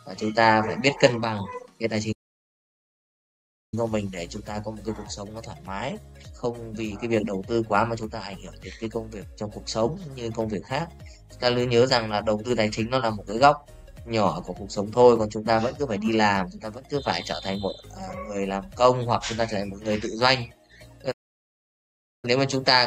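A playback stall cuts the audio twice, from 2.12 to 3.74 s and again from 21.11 to 22.25 s, leaving gaps of 1.6 s and 1.1 s where the output drops to silence mid-flow. Silences this long and this abrupt are likely the player running short of buffered data or its playback thread being held up, so nothing reaches the output until the flow recovers.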